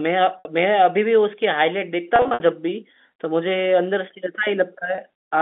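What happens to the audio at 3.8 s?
Nothing goes wrong at 3.8 s: the speech carries on intact through that moment, heard through the same narrow telephone band as the rest of the line.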